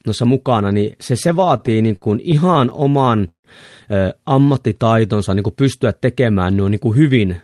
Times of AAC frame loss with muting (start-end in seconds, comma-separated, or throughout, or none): none